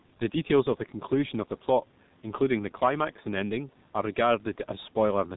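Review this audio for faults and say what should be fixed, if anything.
The whole clip carries heavy G.723.1 codec damage. At 6.3 kbit/s with 30 ms frames, nothing above 4 kHz survives, and the slowly updated voice model leaves the speech muffled and hoarse, with smeared consonants. Switching the call to a wideband codec like Opus or G.722 would fix it.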